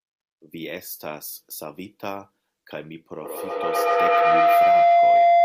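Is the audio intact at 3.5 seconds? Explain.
No. From 3.17 s to the end, a feedback howl is present: a microphone-to-loudspeaker loop gains level on each trip, so the sound narrows to a tone near 700 Hz, with repeats roughly every 150 ms and peaking about 16 dB above the speech.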